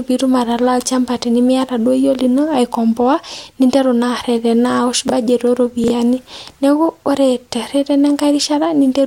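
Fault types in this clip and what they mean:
Chunks out of order: a 20 ms slice of the speech turns up after audio that should come after it, so nothing is missing but the sequence is scrambled and the splices leave hard edges. You get a quick jumbled flicker at 5.08 to 5.12 s, where a chunk lands one slot late, and again at 5.84 to 5.90 s, where one arrives two chunks late, making that second glitch a bit longer.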